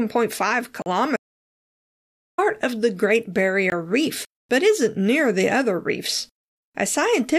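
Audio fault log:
0.82–0.86 s and 3.70–3.72 s, block of digital silence: the speech drops straight to silence for 40 ms, then again for 20 ms, and snaps back with no fade either time. That's most likely the playback or processing chain failing to fill its output buffer in time.
1.16–2.38 s, audio dropout to silence: the speech cuts out mid-flow and stays in dead digital silence for about 1.2 s, with no room tone at all, then picks up again on "of the". Whatever was said in that gap is simply gone. Since the recorder kept writing silence rather than stopping, the likely cause is the input itself being lost for a moment, such as a disconnected mic, a dropped link or a brief accidental mute.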